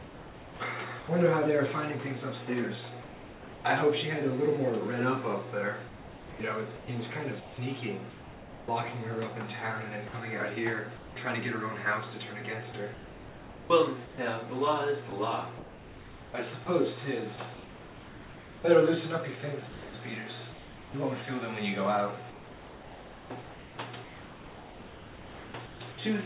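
Sound chopped by the voice detector runs from 0 to 1.08 s: the audio repeatedly breaks into steady hiss, with about 0.68 s swapped out. This is likely caused by the sender's voice activity detector repeatedly switching transmission off on quieter moments, so the receiver substituted comfort noise. The whole band stops near 4 kHz, which fits a 64 kbps G.711 mu-law call path.

Sound dropped by the voice detector follows at 3.02 to 3.64 s. The audio gives way to an even, featureless noise for 0.62 s and then returns abruptly. The likely cause is the detector mistaking a soft passage for background and halting transmission until the level rose again, with comfort noise filling the whole gap.

Sound chopped by the voice detector then recurs four more times, each likely from the same detector gating:

From 5.88 to 8.68 s, about 1.4 s of the audio is replaced.

From 10.08 to 11.16 s, only about 0.26 s is replaced, so the breaks are brief flickers.

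From 12.72 to 20.94 s is the longest stretch. Around 3.5 s is replaced, giving sustained stuttering.

From 22.3 to 25.98 s, about 3.06 s of the 3.7 s span is lost to comfort noise. Only short fragments of the real sound survive.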